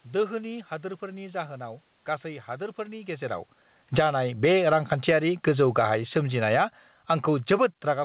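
From 3.81 s, just after "गासै हादोरफोरनि गेजेराव", automatic gain falling sets in as the gain control judges the input too loud or its background noise too strong and lowers its gain. The speech and its background sink together through the end of the clip at about 8 s. Overlapping this, automatic gain rising occurs twice. From 4.05 to 6.95 s the control raises its gain by about 4 dB, so voice and room noise swell slowly together. From 7.6 to 7.97 s, after the talker moves away and the input drops by about 23 dB, the control raises its gain again by about 4 dB, lifting the quieter speech and the background together.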